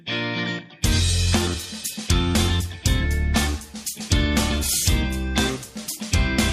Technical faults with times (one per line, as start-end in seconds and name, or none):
none